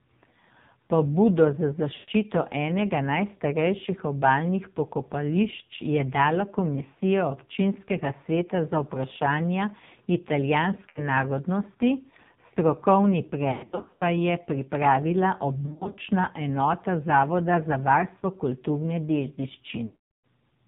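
AMR narrowband mobile codec throughout: the speech is cut off above 4 kHz and sounds buzzy and synthetic, which fits heavy compression at about 5.9 kbps.

Lost AMR speech frames at 1.94 to 2.10 s, 10.90 to 11.03 s (just before "narodnosti strokovni"), 13.52 to 14.03 s (just after "narodnosti strokovni"), 15.66 to 15.97 s (just before "enota zavoda za varstvo"), and 19.86 to 20.25 s. The decoder repeats the last good pitch and vocal-tract settings at falling gain. This causes brief warbles, or smeared fades toward silence in the longer gaps.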